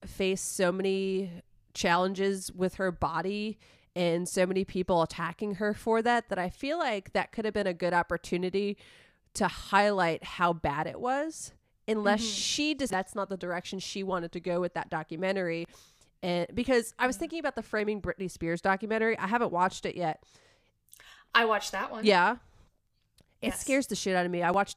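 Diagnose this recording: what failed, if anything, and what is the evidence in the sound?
Dropped samples at 15.65, 17.80 and 20.13 s: three sharp single clicks, each from a fraction of a millisecond going missing, likely a driver or buffer hiccup making the waveform jump.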